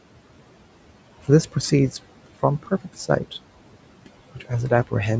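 Speech recorded through a call microphone chain, with noise suppressor artifacts running through the whole clip. The room noise sits about 16 dB below the speech. The suppressor pulls it down by about 18 dB in the gaps and lets it back up under the speech. That gating makes the background pump with each phrase. Between 4.34 and 4.51 s, the speech is cut by the noise suppressor. Here it mistakes part of the speech for noise and turns it down with the background, by up to about 14 dB. About a tenth of a second of sound is affected. That stretch sounds swallowed and faint. The call processing also leaves nothing above 8 kHz, as expected for this path.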